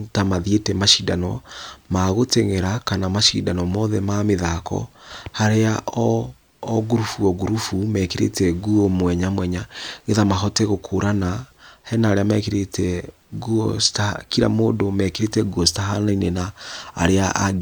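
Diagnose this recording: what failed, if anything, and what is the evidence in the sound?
Nothing failed; no stage in this speech shows faults.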